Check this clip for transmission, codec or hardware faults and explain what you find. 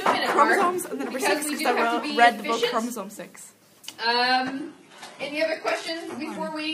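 One transmission fault is present. The adaptive stream drops to a lower bitrate from 4.08 s to the end at 6.74 s. When the connection slowed, the player switched without a gap to a leaner encoding of the same audio, and the quality changes abruptly. Nothing is left above about 11.8 kHz, the upper treble takes on a synthetic, reconstructed sheen, and codec artefacts rise. This fits a switch from roughly 96 kbit/s AAC to a 16 kbit/s HE-AAC rendition.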